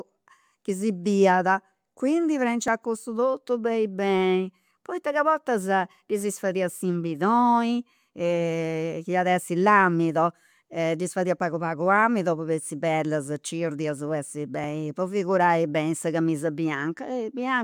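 A tiny skip in the speech comes at 0.70 s and again at 2.68 s, just before "cussu totu beni beni". These are overlaps between stream segments. The time stamps of neighbouring segments overlapped, and the player trimmed away a sliver of audio that was never actually duplicated, so the waveform jumps. The roughly two-second spacing of the skips fits two-second stream segments.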